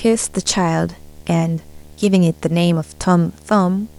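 Video or display buzz runs throughout, a 75 Hz buzz with hash above it, about 30 dB below the speech, from a screen or video cable coupling into the audio path.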